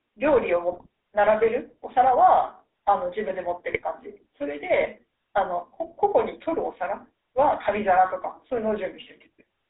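Throughout, the speech carries the buzzy, gravelly roughness of the GSM full-rate codec, consistent with a 13 kbps stream. It squeezes the vocal tract into a simple filter driven by sparse, regularly spaced excitation pulses, and the damage is plainly audible. The line passes roughly 300 Hz to 3.7 kHz. What marks this as GSM rather than a generic narrowband channel or an MP3-style codec is the coarse, rasping texture riding on every voiced sound, not just a dull, band-limited tone or swirly, watery artefacts.

At 0.72 to 0.86 s and again at 3.72 to 3.84 s, GSM bit errors break in. Corrupted bits reach the decoder, with an error rate of about 1.8% and 1.6%, enough to spoil several consecutive frames each time. Wrong filter, pitch and gain values twist the spectrum and jolt the level, so the voice squawks, pops and gargles briefly. Unlike packet loss, there is no gap or smoothed-over concealment. 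The sound stays present but turns grotesquely wrong.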